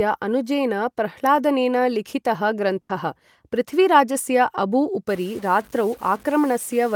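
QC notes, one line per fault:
2.81–2.91 s, burst of packet loss: about 80 ms of audio lost, concealed by a fading held continuation, then resumes further on; spectrogram shows a smeared, decaying continuation.
5.09–6.96 s, stuck bit: after "पृथ्वीराजस्य अबू", distortion with noise filling pauses, likely a stuck data bit; waveform shows offset steps, spectrogram broadband hash.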